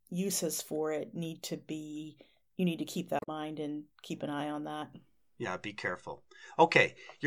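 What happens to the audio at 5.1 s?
Nothing goes wrong at 5.1 s; the speech there plays through intact, with no dropout, click, or distortion.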